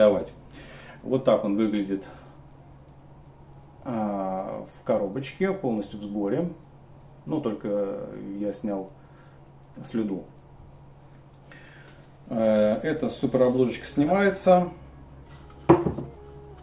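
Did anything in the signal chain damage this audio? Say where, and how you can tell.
No, nothing in the chain seems to have harmed this audio, and I can't point to any stage where it went wrong.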